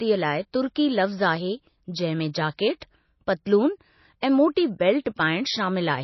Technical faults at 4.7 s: low-bitrate audio saved at a high bitrate

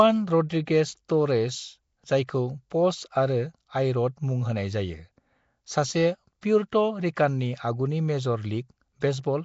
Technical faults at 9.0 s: Nellymoser compression; pre-echo

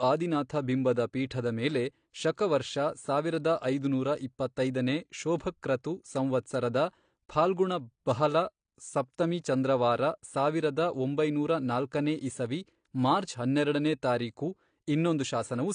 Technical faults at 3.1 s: AAC compression

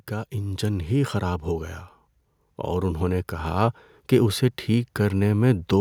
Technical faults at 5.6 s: automatic gain rising

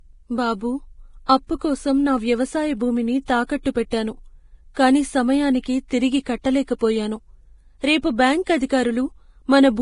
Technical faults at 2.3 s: Vorbis compression

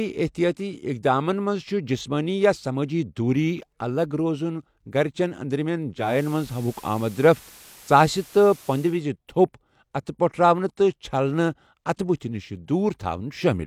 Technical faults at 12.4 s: none

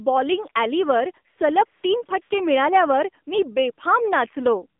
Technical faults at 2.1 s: AMR narrowband mobile codec; AMR comfort noise

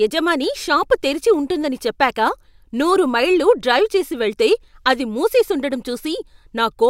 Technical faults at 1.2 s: none

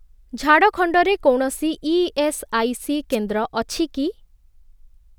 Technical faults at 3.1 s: wireless microphone noise hit

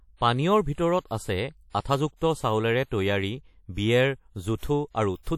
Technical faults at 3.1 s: WMA compression

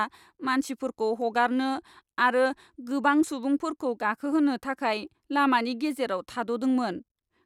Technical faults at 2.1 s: none

